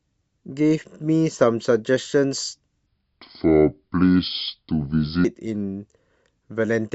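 From 2.86 s to 5.25 s the speech drops into a section at the wrong speed, playing at 0.681 times its proper rate, likely because that stretch was resampled against the wrong clock. Pitch falls by about seven semitones along with the tempo, so the voice turns deep, slow and drawn out, then snaps back. A spectrogram shows harmonics and formant bands squeezed lower and smeared wider in time, and the waveform's cycles visibly lengthen.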